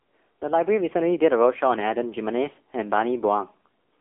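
From the first moment the speech sounds boxed-in, buzzy and synthetic, with nothing above 3.5 kHz and the low end thinned below about 300 Hz. This is the AMR narrowband mobile codec, heavily damaged here. The voice is rebuilt from a vocal-tract model excited by only a few pulses per short subframe, and the coarseness of that rebuild points to one of the low AMR-NB modes, around 6.7 kbps. The telephone band limits the range.

From 0.41 s to 3.54 s the whole sound swells steadily, with the voice and the background rising together by about 8 dB over roughly three seconds. This is automatic gain rising. The gain control judged the incoming level too quiet and slowly increased its amplification. Because it scales everything at once, there is no change in balance, only a gradual, even climb in loudness.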